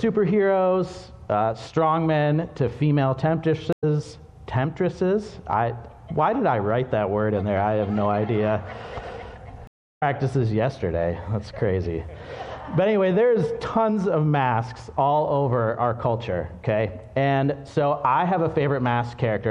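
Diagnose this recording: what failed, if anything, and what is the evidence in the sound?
The codec stage shows damage through the whole clip: the upper detail has a watery, swirling quality where weak frequency components drop in and out between frames. Transients sound smeared rather than crisp. The likely cause is MP3 compression at a low bitrate, and the degree of damage fits something around 64 kbps, where the encoder runs short of bits and discards high-frequency content.

Two stream reconnects point to a network fault. At 3.73 s the audio drops out for about 97 ms and comes back at a point roughly a tenth of a second further on. At 9.67 s a longer gap of about 340 ms ends at 10.03 s, and the audio resumes around 0.4 s later in the material. In each case the connection broke, the player went silent, and a fresh decoder picked the stream up again mid-flow, so the skipped audio was never played.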